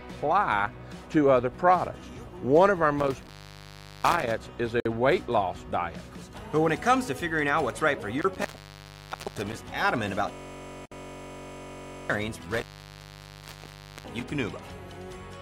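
Intermittent contact drops the sound out three times, at 2.99–4.31 s, 8.19–9.62 s and 12.44–14.24 s, for openings of about 0.75 s, 0.92 s and 1.42 s. A loose cable or plug briefly breaks the signal path, so the audio vanishes with crackle at each edge and only faint hiss remains while the connection is open. A gap at a join of encoded pieces appears at 4.80 s (54 ms) and 10.86 s (60 ms), six seconds apart, which points to separately encoded six-second segments spliced end to end. Each encoder pass leaves its start-up delay and final-frame padding in place, so a short, slightly smeared silence opens and the sound resumes exactly where it left off. A system hang loop runs from 10.32 to 12.10 s, where one 21.33 ms slice repeats roughly 80 times. The machine or driver froze while the audio hardware kept replaying its ring buffer, which fits a 1024-sample buffer, and the result is a steady buzz at about 47 Hz.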